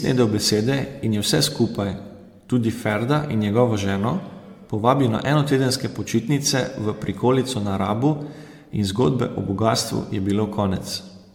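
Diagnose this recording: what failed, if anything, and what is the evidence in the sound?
The failure is at the codec stage. Throughout the speech the sound is swirly, smeared and hollow. Attacks blur, and nothing is present above 19.8 kHz. This is likely generation loss: around seven MP3 passes near 100 kbit/s, each requantising on a shifted frame grid.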